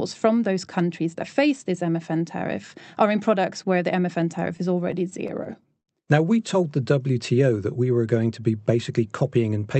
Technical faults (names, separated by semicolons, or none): repeated stalls (stutter); jitter buffer speed-up